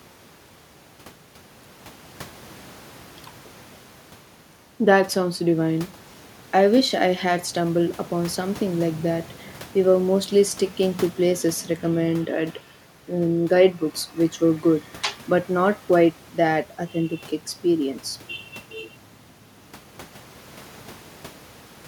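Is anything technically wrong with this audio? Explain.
No, no technical faults heard.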